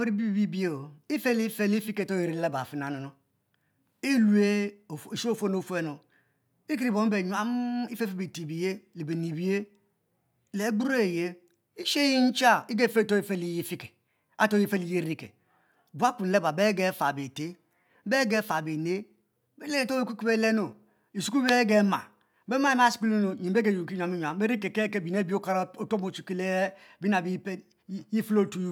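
Speech recording with nothing technically wrong with it.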